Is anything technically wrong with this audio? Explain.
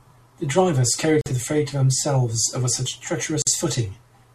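Yes. Separately encoded pieces were joined without trimming the encoder's start delay and end padding, leaving a gap at a join of encoded pieces at 1.21 to 1.26 s (about 47 ms) and 3.42 to 3.47 s (about 48 ms). The speech drops to silence with smeared edges, then resumes where it stopped.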